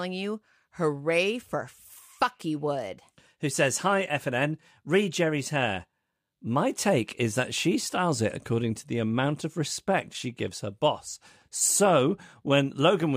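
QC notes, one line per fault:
No technical faults can be heard anywhere in the speech recording.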